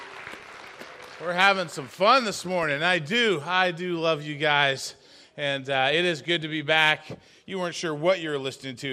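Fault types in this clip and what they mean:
DAB burbling: from 0.35 to 0.73 s and again from 6.88 to 7.01 s, burbling noise blips sit over the sound as residual bit errors of roughly 0.15 and 0.2 percent corrupt MP2 audio data, putting short blips of noise in single sub-bands.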